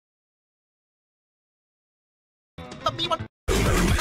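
A block of digital silence at 2.66 s, only about 0.43 ms long, heard as a tick, shows as a vertical spectrogram line and a brief waveform notch, likely an unfilled output buffer.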